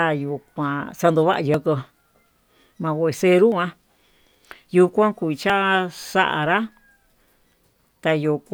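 At 1.54 s, just after "yuu kuan xandova'a", then at 3.52 s and again at 5.50 s just after "yuu kuan", the speech skips forward. Each skip drops about 20 ms, with the two sides butted together and no silence. The steady two-second spacing points to audio likely missing between chunks, lost as a 2.0 s chunk closes and the next opens. On a waveform each seam is a sudden step in shape; a spectrogram shows a thin vertical break where harmonics jump.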